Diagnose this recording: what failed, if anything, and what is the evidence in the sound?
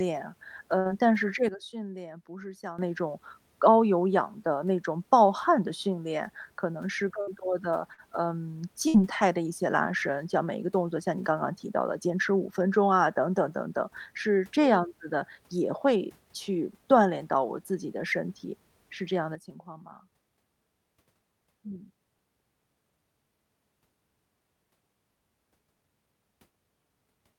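Burst of packet loss, at the network stage, occurs at 0.79 to 0.88 s, 7.21 to 7.30 s, 7.93 to 8.01 s and 8.88 to 8.97 s. Each time the receiver stretches the last speech for 51 to 60 ms as a fading buzz or hiss, then resumes with about 60 ms of speech skipped. A buffer underrun would leave silence and pick up where it stopped. Here the held, decaying fill and the jump ahead in the speech mark lost packets.

Sudden gain jump: the level drops abruptly by about 12 dB at 1.49 s and returns at 2.79 s, then drops by about 11 dB at 19.35 s and stays down to the end. Speech and background noise step together, instantly, with no ramp, which separates this from automatic gain control or compression, where gain glides and the noise floor pumps. The likely cause is a gain setting applied sample-to-sample in call processing or the driver.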